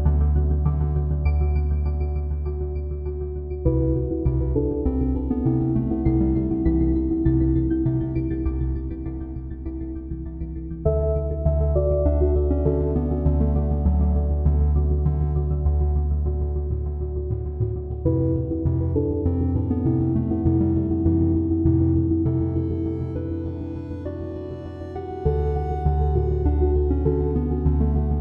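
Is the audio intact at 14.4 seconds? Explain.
Yes, the audio at 14.4 seconds is intact, with no dropout, click, distortion or other fault at that point.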